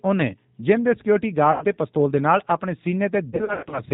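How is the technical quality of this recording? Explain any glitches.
Quality's held back by two things: codec coloring the whole way through, plus a couple of dropout patches near the middle and end.

Throughout, it's the G.729 codec. The speech is rebuilt from a vocal tract model and a few pulses, so it sounds rough and a bit synthetic, with nothing above 4 kHz, which fits an 8 kbit/s codec.

Around 1.52 to 1.66 s, and again from 3.30 to 3.81 s, there's VoIP packet loss concealed by the speech codec. The decoder stretched its last frame into a fading buzzy tone or coloured noise: about 90 ms lost first, then 210 ms scattered across 420 ms. The sound stays weak briefly after recovering.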